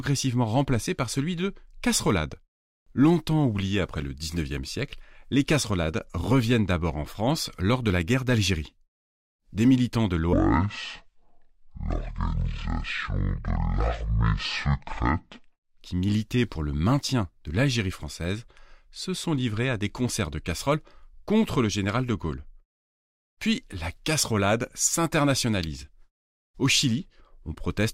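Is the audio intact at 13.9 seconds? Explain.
No. At 13.9 seconds the speech falls inside a section at the wrong speed, running from 10.33 to 15.81 s. That stretch plays at 0.523 times its recorded speed, just over half. Speed and pitch drop together, so the voice sounds deep and slow, about ten semitones lower. The likely cause is playback or editing against the wrong clock. The audio switches to this rate at the start of the span and recovers at its end.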